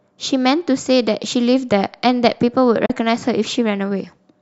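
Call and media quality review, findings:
Digital broadcast dropout, 2.86–2.90 s. Speech fades out over 8 ms, then a 32 ms hole. Receiver muted on a bad frame. Fits one lost frame.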